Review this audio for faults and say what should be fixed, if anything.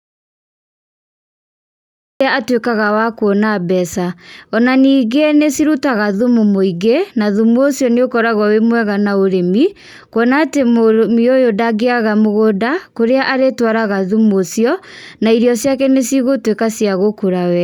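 The speech clip opens in dead silence: from the very start until about 2.21 s there is nothing at all, not even room tone, and the speech then arrives already in progress. That is an audio dropout to silence, likely from the input feed being lost or muted while the recorder kept writing silence, so whatever was spoken in those first two seconds is gone. To prevent it, confirm the input connection and mute state before recording begins.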